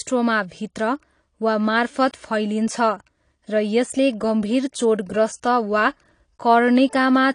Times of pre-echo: none

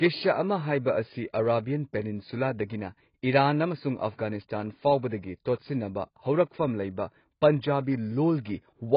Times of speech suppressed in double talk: none

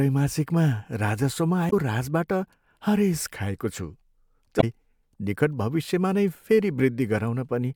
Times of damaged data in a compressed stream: 1.67-1.73, 4.57-4.63

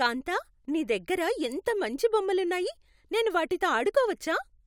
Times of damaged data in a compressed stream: none

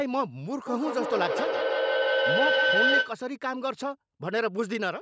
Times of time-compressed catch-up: none

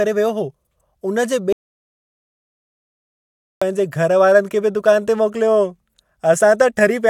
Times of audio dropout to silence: 1.53-3.62

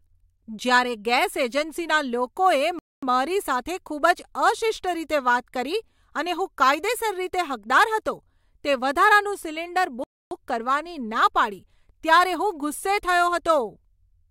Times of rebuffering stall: 2.79-3.03, 10.04-10.31

